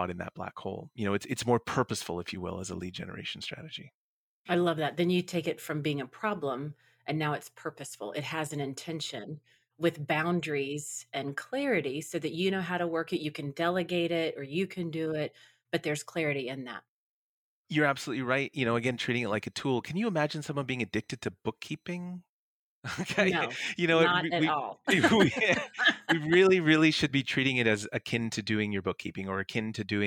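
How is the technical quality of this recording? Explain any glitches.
No technical faults turn up anywhere in the recording, so there are no glitches to explain.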